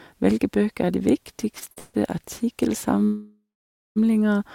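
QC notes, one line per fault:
1.59–2.30 s, repeated stalls (stutter): the speech drags and catches four times in under a second, each catch a brief smeared hold of the preceding sound. The longest lasts 156 ms, and together they fill 231 ms, about a third of the stretch. Packets arrived late or slower than playback, so the jitter buffer kept running dry and the receiver stretched the last sound each time. Nothing is skipped; the speech is just pushed later.
3.04–3.98 s, call audio freeze: the speech halts and the last sound hangs on as a fading buzz or hiss that sinks into roughly half a second of silence (520 ms). The speech then picks up exactly where it stopped, now 914 ms late, with nothing dropped. This is likely packets held up in transit until the jitter buffer emptied, with the receiver padding the wait with concealment rather than losing any of the speech.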